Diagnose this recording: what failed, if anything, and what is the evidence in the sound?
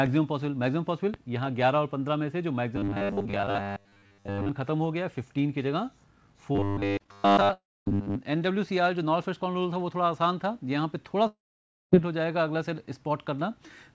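Loud pop, analogue wiring or driver stage: a sharp pop about 10 dB above the sound at 1.14–1.16 s. It likely comes from a voltage step such as a plug or switch.

Robotic sound from repeated short buffers, driver or buffer stage: a rigid 100 Hz buzz at 2.76–4.49 s and 6.55–8.18 s. Most of the audio is repeated, likely from a 10 ms buffer.

Repeated packet loss, network stage: choppy, robotic sound at 6.98–7.19 s. Several short holes, the longest 19 ms, are patched by continuing the last sound.

Long network dropout: at 7.53–7.89 s and 11.27–12.02 s, a fading continuation of the last sound gives way to about 240 ms and 540 ms of silence. The audio then resumes with those parts missing, likely lost in transit.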